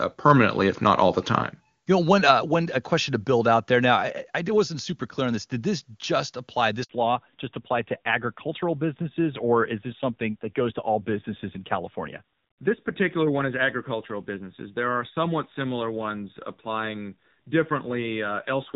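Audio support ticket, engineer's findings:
Handover gap, 6.83 to 6.89 s, right after "this just apply": 60 ms hole, sound dies fast then hard silence. Network switch delivered no frames. Unlike a packet-loss dropout, there's no concealment smear, and the tone changes afterward.

Fallback to narrowband, 6.89 s to end: band stops at 4 kHz, sibilants dulled, rougher. Call left AMR-WB HD Voice, clean before the switch, for AMR-NB, fitting a low mode near 7.4 kbit/s. A persistent step change, not intermittent filtering.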